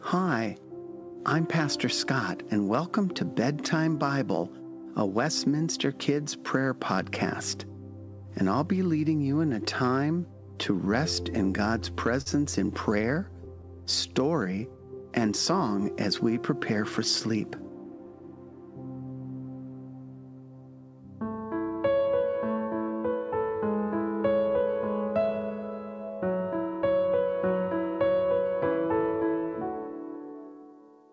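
From 11.44 to 12.28 s the audio shows repeated stalls (stutter): packets reached the receiver late, so its jitter buffer emptied five times, and each gap was bridged by stretching the last sound, about 90 ms in all, the longest 44 ms. It happens again from 13.02 to 13.65 s, with five shorter gaps totalling 52 ms, none over 18 ms. Nothing is lost, but the flow catches and drags. On a spectrogram the bridged stretches appear as brief smeared, repeated bands; the longer ones thin out in the waveform as they fade.

Jitter buffer slow-down follows at 13.68 to 14.14 s and again at 14.55 to 15.20 s. After the stalls the buffer was low, so the receiver rebuilt its reserve by repeating single pitch periods, adding 46 ms and then 52 ms. Playback runs at about 92 and 93 percent speed with the pitch unchanged, so sounds are drawn out. On a spectrogram the harmonics stay at the same height but stretch sideways, and the waveform shows duplicated cycles.

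Jitter buffer speed-up runs from 17.47 to 18.36 s. Too much audio had built up, so the receiver cut short pieces of one or a few pitch periods, roughly a tenth of a second in total, playing about 12 percent fast at the same pitch. It sounds hurried. On a spectrogram the events look compressed in time, with no energy above 8 kHz throughout, the usual top limit of the G.722 call path.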